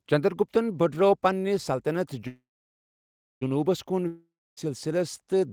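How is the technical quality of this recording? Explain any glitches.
Two connection faults interrupt the speech.

From 2.27 to 3.43 s there is a call audio freeze. Packets were likely delayed in transit, leaving the receiver's jitter buffer empty. The receiver extended the last sound as a short fading buzz or hiss and then held about 1.0 s of silence. When the packets arrived, the speech resumed exactly where it stopped. Nothing is lost, but the 1.14 s gap pushes everything afterwards later by that amount.

From 4.07 to 4.59 s there is a long network dropout, likely from packets that never arrived at all. The receiver again filled the hole by stretching the last sound into a fading buzz or hiss, which gives way to about 0.29 s of silence. When the speech returns, it picks up further along. About 0.5 s of the original speech is gone for good, so the words run on with a chunk cut out.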